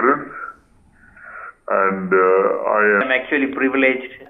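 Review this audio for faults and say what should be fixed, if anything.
A likely mismatched playback clock slowed 0.0 to 3.01 s to 0.748 times speed, a section at the wrong speed that drags and drops roughly five semitones. Confirm that the sample rate matches between editor, file and playback device so every section plays back at its recorded speed.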